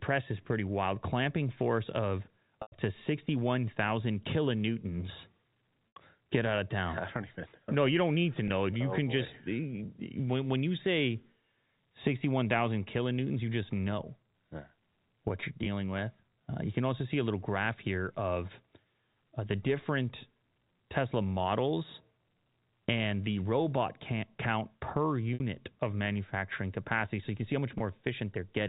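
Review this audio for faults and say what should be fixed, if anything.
Packet loss with pitch repetition occurs at 2.62–2.72 s (100 ms lost), 5.94 s (80 ms), 8.48 s after "you don't need to" (20 ms), 15.64 s (20 ms), 25.34 s between "the robot count per" and "of manufacturing capacity" (60 ms), and 27.78 s after "you can see how" (20 ms). At each gap the receiver fills the hole by looping the last pitch period, which is heard on the short gaps as a brief held, buzzy tone; the longer ones at 2.62 s and 5.94 s fade into silence before the speech returns with a short cross-fade. The losses all come in 20 ms steps, which fits 20 ms packets dropped one to five at a time.

To prevent this, add forward error correction or packet redundancy on the transport path and size the jitter buffer to absorb bursts of around 100 ms.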